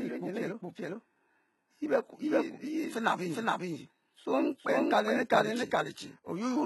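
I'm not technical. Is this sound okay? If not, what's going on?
No. A doubled audio track runs through the whole clip: the speech is heard twice, with a second copy about as loud trailing roughly four-tenths of a second behind. It is likely captured twice, once through a slower route, so every phrase gets a flat, dry echo.

HE-AAC compression also affects the entire clip and damages it heavily. It is likely from squeezing the file very small: only the lower sounds are kept faithfully, and the treble is rebuilt from copies of them. S sounds come out gritty or lispy, and nothing is left above about 11.8 kHz.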